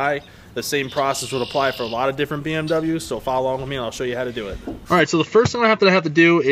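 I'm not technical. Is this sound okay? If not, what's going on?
No. There's an input switched to a poorer device, from 4.99 s to the end at 6.51 s. The sound suddenly turns duller, losing everything above 7.4 kHz, with a faint new hiss but no gap or jump in loudness. That points to the recording likely changing to a lower-quality microphone partway through.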